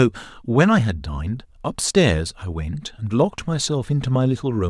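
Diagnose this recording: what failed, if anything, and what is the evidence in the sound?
Nothing failed at any stage of the chain, and the speech in this recording carries no audible evidence of a fault.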